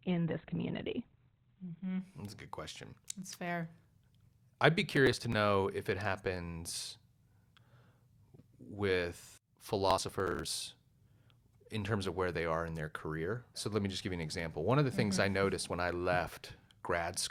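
For the first 2.0 s the speech sounds dull and smeared, with nothing above 4.3 kHz, then brightens abruptly without a gap: an adaptive stream starting at a low bitrate before stepping up.

From 4.90 to 5.34 s, between "I'd be" and "if it happens", and again from 9.9 to 10.5 s, a gritty crackle tears across the sound. This is processor overload crackle, where many buffers of around 10 ms were skipped over a short stretch.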